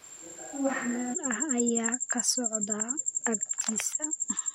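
From the very start until 1.13 s, the recording likely relies on a distant microphone in place of the close one. The speech sounds roomy and hollow, thinner in the bass, roughly 5 dB quieter, with room noise only about 25 dB down. It snaps back abruptly.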